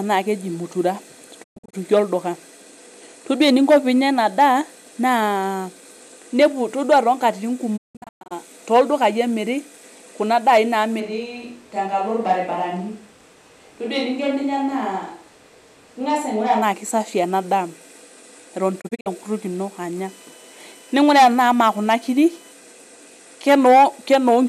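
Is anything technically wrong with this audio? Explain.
Yes. There are three kinds of fault.

Digital broadcast dropout occurs three times. The receiver lost valid frames and muted, with fades of about 20 ms, until clean frames resumed. After "naa keji mutura", at 1.42–1.75 s, about 216 ms of sound vanishes in holes spread over 288 ms, the longest lasting 120 ms. After "inepu todua toonkatitin", at 7.76–8.33 s, 408 ms is lost over 528 ms, with the longest hole 168 ms. At 18.80–19.08 s, 120 ms drops out over 240 ms.

A switch to a distant microphone follows "kuna daai", from 11.02 to 16.61 s. The close microphone's feed was likely lost, leaving a farther pickup. The voice abruptly turns roomy, hollow and thin in the bass, about 5 dB quieter, with room noise around 30 dB below the speech, then snaps back.

USB whine runs from 20.05 to 22.52 s. Current drawn in the bus's 1 ms frames leaks through power or ground, producing a steady 1 kHz tone with harmonics, strongest at 3 kHz, roughly 35 dB below the signal.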